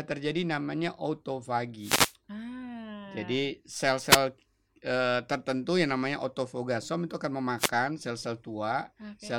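Wireless microphone noise hits break into the speech at 1.79 to 2.14 s, 4.07 to 4.20 s, and 7.58 to 7.70 s, just after "namanya autofogasom itu akan". Each is a brief swish of static. The FM radio signal faded as reflections cancelled, and receiver noise rose over the voice.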